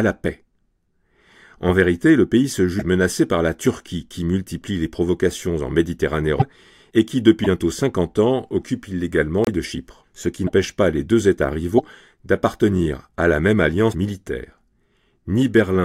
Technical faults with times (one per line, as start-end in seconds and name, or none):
2.78-2.81 broken MP3 bit reservoir
6.39-6.42 broken MP3 bit reservoir
7.43-7.46 broken MP3 bit reservoir
9.44-9.49 broken MP3 bit reservoir
10.46-10.50 broken MP3 bit reservoir
11.77-11.80 broken MP3 bit reservoir
13.91-13.94 broken MP3 bit reservoir